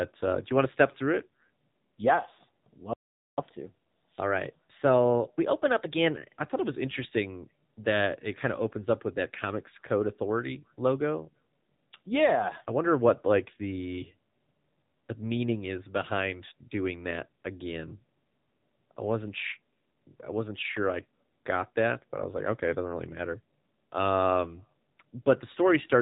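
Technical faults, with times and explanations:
Throughout: AMR narrowband mobile codec. Everything above 4 kHz is gone, so the speech sounds boxed-in and telephone-like. The damage is plainly audible as a buzzy, synthetic edge, because each 20 ms frame rebuilds the voice from a vocal-tract model driven by only a few pulses. That buzz points to one of the lower AMR-NB modes, around 7.4 kbps. On a spectrogram, energy stops at a hard 4 kHz ceiling, and harmonics look smeared and blocky in frame-sized steps.
2.93 to 3.38 s: playback stall. The speech cuts off mid-flow and there is about 0.44 s of dead silence before it resumes. The cause is likely the player running short of data or its thread being blocked, so output halted until it recovered. The waveform drops abruptly to a flat line for that stretch, and the spectrogram shows a clean vertical blank band across all frequencies, with no gradual fade on either side.
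3.38 to 6.38 s: catch-up at higher speed. Once sound returns, starting with "I thought it was", the speech runs 1.1 times fast for 3 s and is raised by about one and a half semitones. The player is resampling its backlog to win back the time lost in the stall, then drops back to normal rate. On a spectrogram the harmonics sit visibly higher and syllables look compressed in time, and both return to normal spacing at 6.38 s.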